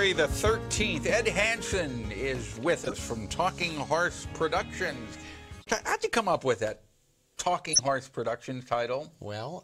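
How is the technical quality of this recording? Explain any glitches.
The recording has four short glitches, all of the same kind. Corrupt frame decoded at 2.84 to 2.92 s, 5.59 to 5.67 s, 7.73 to 7.88 s and 9.04 to 9.10 s: damaged bits in a few compressed frames were still decoded, so misread gains and codes throw energy into the wrong frequencies for each burst. They come out as brief chirps or noise blips. The one near 7.7 s is loudest and longest, the one near 2.8 s is clearly audible, and those near 5.6 s and 9.0 s are faint.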